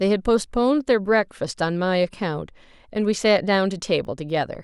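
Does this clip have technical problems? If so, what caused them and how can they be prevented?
Yes. From 3.55 to 4.55 s there are periodic USB or driver dropouts: about five tiny ticks, one every 0.25 s, where roughly half a millisecond of speech is lost to silence as something stalls the audio path. Prevent it by disabling the interrupting background task or using a dedicated USB port.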